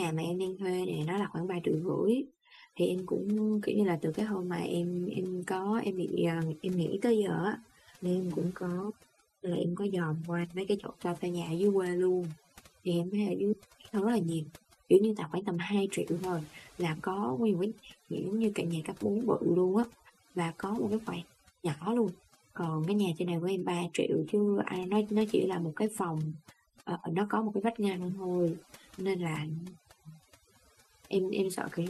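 A speech recording with overdone noise removal throughout: the spectrogram shows a blackened background dotted with isolated twinkling specks, and the voice's quieter bands are gouged away.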